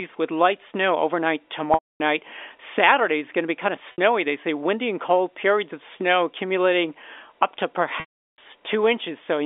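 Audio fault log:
1.74–2.00 s, 3.92–3.98 s and 8.00–8.38 s, packet loss with pitch repetition: gaps of 260 ms, 60 ms and 380 ms follow "with light snow overnight", "to be kind of" and "snow accumulating up to", which fits 20 ms packets. The receiver repeats the last pitch period and fades it over about 50 ms. The short gap becomes a brief buzzy hold, and the longer two fade to silence before a cross-fade back. A plain dropout would cut straight to silence with no held tone, and the surrounding narrowband telephone sound stays clean.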